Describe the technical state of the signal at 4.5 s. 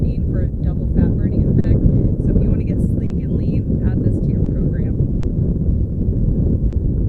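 Just before 4.5 s, from 4.44 to 4.48 s, there is a short stall from a late packet. A packet missed its playout slot, the jitter buffer ran dry, and the receiver stretched the preceding sound by 20 ms before resuming, so a sound hangs briefly with a faint buzz or dip.

Underlying this moment is clock drift between sender and receiver. The sender's clock runs slower by roughly 3 percent, so the buffer keeps draining and the receiver repeats short fragments to compensate. The result is small, unevenly spaced timing hiccups through the clip.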